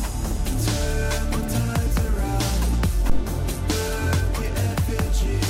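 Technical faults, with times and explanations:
3.10 to 3.25 s, phantom power thump: you get a deep low thump peaking at about -9 dBFS that dies away in roughly 34 ms. A supply like phantom power switched on or off on a live input sends a voltage step through the coupling capacitors.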